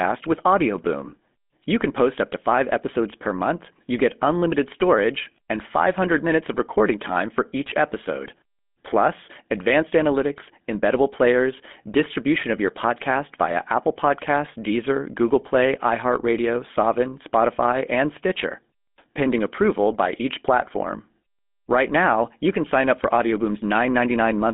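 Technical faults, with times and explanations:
Throughout: GSM full-rate codec. The speech has that gravelly, buzzy grain you get when a vocal-tract model is driven by coarse pulse excitation. It sits in a narrow phone band, roughly 200 Hz to 3.6 kHz, with nothing above 3.8 kHz, which fits the 13 kbps full-rate coder.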